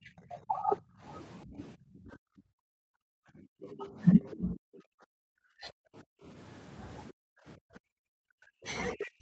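Speech suppressed in double talk, from 0.0 to 0.8 s and again from 1.45 to 2.65 s: the voice dips by roughly 25 dB and then roughly 40 dB, likely because the echo canceller mistook overlapping talk for loudspeaker echo and turned everything down.

Background gated by the echo canceller, from 2.72 to 3.48 s: the room sound drops by about 40 dB as the canceller clamps the microphone, then returns when it releases.

The other side's voice leaking through, from 3.73 to 4.79 s: a second voice sits roughly 20 dB below the talker, likely loudspeaker playback that the canceller failed to subtract. At the same time, from 3.76 to 5.71 s, speech is again suppressed in double talk, cut by up to roughly 40 dB.

Background gating returns from 6.03 to 6.25 s and from 7.12 to 7.42 s, with the room tone briefly pulled down by about 40 dB each time.

Speech suppressed in double talk resumes from 7.7 s to the end, with the voice dipping by roughly 40 dB, likely while the far side is talking.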